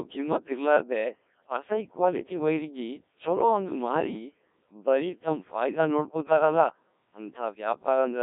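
From start to end, the speech runs through a Codec 2 vocoder. The decoder does not keep the waveform. It rebuilds the voice from sine waves, using only pitch, voicing, energy and a spectral envelope. At about 1.3 kbit/s the damage is heavy. The voice sounds robotic and buzzy. Nothing survives above about 3.7 kHz, and the band sits roughly between 200 Hz and 3.6 kHz. That gives a narrow, radio-like tone.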